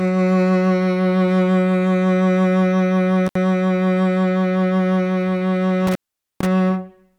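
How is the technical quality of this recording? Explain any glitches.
The music is marred by two dropouts from an intermittent contact. A loose cable or plug briefly opened the signal path, at 3.26 to 3.35 s (about 63 ms open) and at 5.87 to 6.46 s (about 450 ms). The music cuts out with crackle at each edge, leaving faint hiss.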